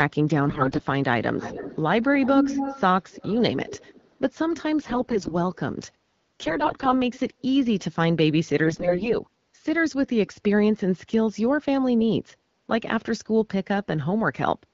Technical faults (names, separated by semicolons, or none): AMR bit errors; echo leak